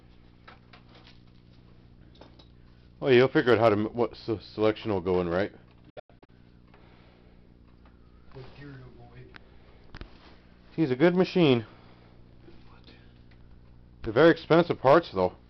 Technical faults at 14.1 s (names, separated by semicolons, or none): none